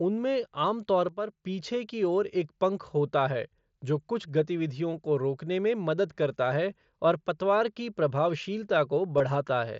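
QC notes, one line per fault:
1.09–1.45 s, sudden gain jump: the level drops by about 8 dB from one sample to the next, and the sound and the background noise fall together, with no fade in between. This likely comes from a gain setting or bit shift applied without a ramp.
9.18–9.20 s, concealed Bluetooth headset packet loss: about 22.5 ms of audio goes missing, which fits a few lost headset packets. The receiver fills the gap by repeating the best-matching recent stretch of waveform inside the mSBC wideband stream.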